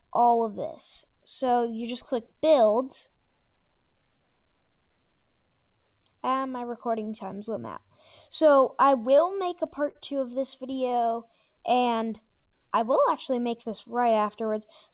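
At 9.91 s there is a short stall from a late packet. A packet missed its playout time and the jitter buffer ran dry, so the receiver stretched the last sound for about 40 ms before picking up exactly where it left off. Nothing is lost, but the delay grows by 40 ms. You hear one sound held a beat too long, with a faint buzz or dip. On a spectrogram the harmonics run flat and repetitive for that sliver.

From 10.47 to 10.93 s come repeated stalls (stutter). Packets kept arriving late, and the buffer emptied four separate times. Each gap was bridged by continuing the last sound. The longest gap is 12 ms and about 41 ms is filled in total, roughly 9% of that stretch. The audio drags and hiccups. The waveform shows small repeated, periodic segments, and the spectrogram shows brief frozen bands breaking the normal movement.

From 10.97 to 13.02 s the jitter buffer slow-down follows. To rebuild its reserve, the receiver duplicated single pitch periods and slices of pauses, adding about 151 ms. 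Playback runs at about 93% speed with the pitch unchanged, so sounds feel drawn out. The spectrogram looks horizontally stretched, with the repeated cycles visible in the waveform. Throughout, nothing appears above 4 kHz, which fits a narrowband call codec such as G.711.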